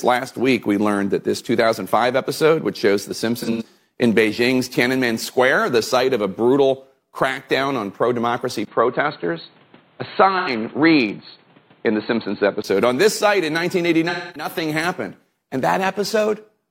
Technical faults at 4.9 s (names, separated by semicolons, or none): none